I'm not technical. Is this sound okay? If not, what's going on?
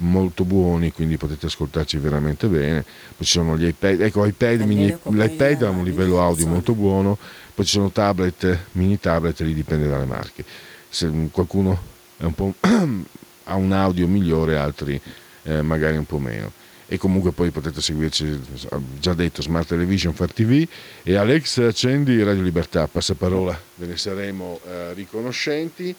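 Yes, nothing stood out as wrong when listening to this recording.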